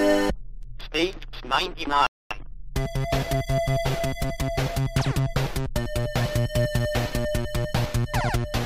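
At 2.07 s the audio cuts out for about 241 ms in a playback stall, likely the player running dry or its thread getting blocked, before resuming at 2.31 s. From 2.31 s to 4.71 s there's time-compressed catch-up: the player trims the backlog, so it runs about 1.1 times fast at normal pitch.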